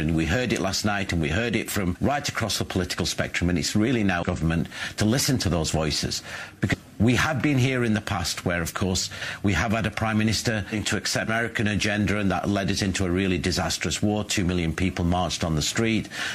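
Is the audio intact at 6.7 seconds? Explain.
No. Between 6.69 and 6.75 s, compressed frames are skipped: about five 46.4 ms frames never play, so the audio jumps ahead roughly a fifth of a second.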